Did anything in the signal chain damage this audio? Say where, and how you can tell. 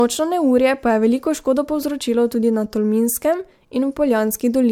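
Yes. Throughout the speech there is generation loss at the codec stage, most likely from the audio being decoded and re-encoded as MP3 about three times. Each pass re-quantised on a shifted frame grid, so the swirl, smearing and hollowness sound worse than a single encode near 100 kbit/s would. On a spectrogram, content stops at a hard ceiling near 19.8 kHz, patchy holes appear through the upper bands, and the onsets in the waveform look blurred.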